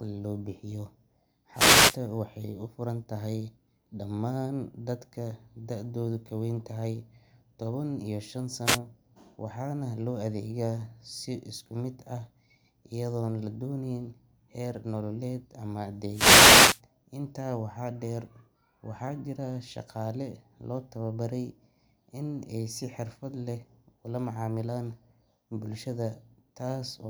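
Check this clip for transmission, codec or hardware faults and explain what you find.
The clip has one recurring fault, a wireless microphone noise hit, occurring three times: 1.53 to 1.99 s, 8.64 to 8.79 s, and 16.11 to 16.81 s, just after "heer nololeed ama". The analogue FM radio link fades as reflected signals cancel at the receiver, so receiver noise climbs and, in a deep fade, breaks up into clicks. Each is heard as a brief swish or burst of static over the speech, lasting from about 0.15 s to 0.7 s.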